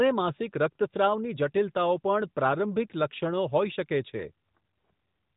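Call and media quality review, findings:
No faults found in the speech: the signal arrives through the AMR narrowband mobile codec at 12.2 kbps, so the band ends at 4 kHz and the codec's light colouring is the expected character of that path rather than a defect.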